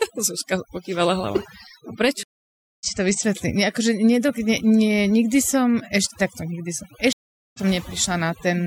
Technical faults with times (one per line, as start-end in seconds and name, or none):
0.00-8.66 overdone noise removal
2.23-2.86 stream reconnect
7.13-7.60 stream reconnect